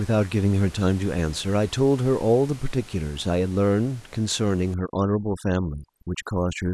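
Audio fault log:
4.74–6.73 s, overdone noise removal: from here to the end, the room noise, which sat about 24 dB under the speech before this point, suddenly drops and breaks up into little twinkling, chirpy specks. The denoiser is clamping each frequency band down hard whenever it drifts near its noise estimate, so the quieter bits of the speech get cut out along with the noise.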